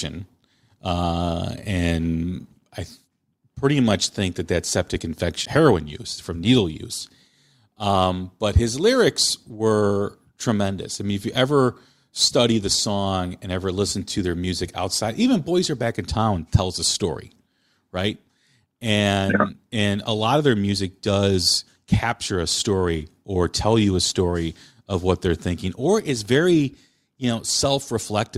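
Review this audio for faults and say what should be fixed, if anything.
At 5.45 s the speech jumps abruptly ahead with a small blip; a stream segment skipped is the likely cause, the player dropping an unloaded segment and continuing. Larger playback buffering with retry on failed segment requests would prevent it.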